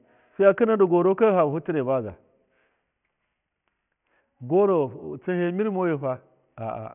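Aliasing runs through the whole clip from the very start. The audio stops dead at 3 kHz, which points to the speech being knocked down to a 6 kHz sample rate with no low-pass filter first. Everything that sat above 3 kHz got folded back down into the band as unrelated tones, sitting roughly 30 dB under the speech. You hear it as a gritty, metallic edge on sibilants, with the top end jammed hard against that 3 kHz ceiling.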